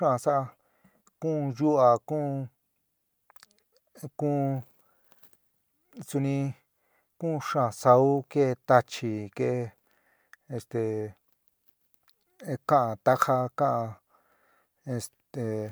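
No technical faults can be heard anywhere in the recording.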